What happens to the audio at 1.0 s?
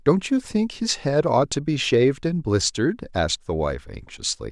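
Nothing goes wrong at 1.0 s; the speech continues intact through that moment.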